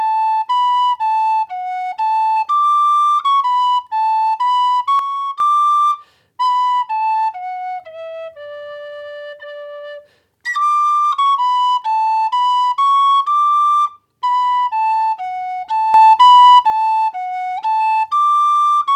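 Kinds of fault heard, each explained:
Sudden gain jump: the digital gain was likely switched from one sample to the next with no ramp, so the sound and its background noise drop together by about 8 dB from 4.99 to 5.40 s, then jump up by about 9 dB from 15.94 to 16.70 s.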